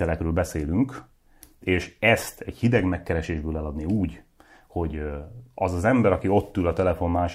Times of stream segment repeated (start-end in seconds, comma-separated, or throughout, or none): none